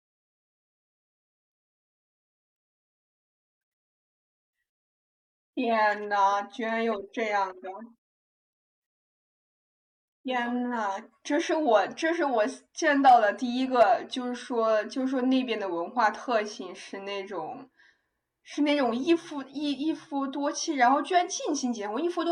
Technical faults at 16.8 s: none

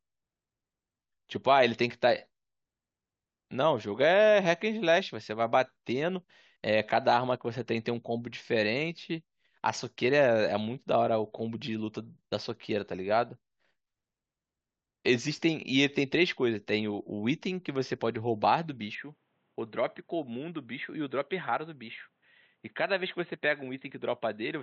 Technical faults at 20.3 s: input switched to a poorer device

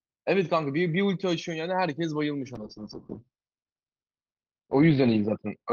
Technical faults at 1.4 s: none

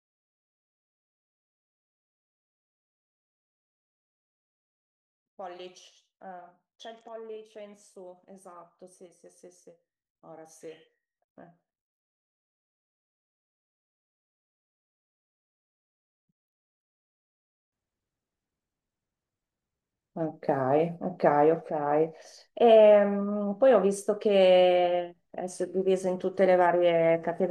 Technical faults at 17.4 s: one channel inverted

